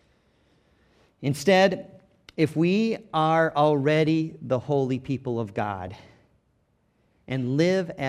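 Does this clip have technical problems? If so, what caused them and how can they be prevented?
Yes. DAB burbling appears at 2.42 s and again from 5.87 to 6.15 s: weak reception let bit errors of a few tenths of a percent slip past error correction, corrupting MP2 samples and scale factors so single sub-bands jump in level, giving burbling over the speech. Improving reception with a better-placed antenna, or capturing the programme from a stronger multiplex or a wired source, prevents it.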